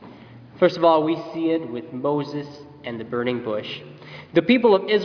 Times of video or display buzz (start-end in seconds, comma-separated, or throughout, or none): none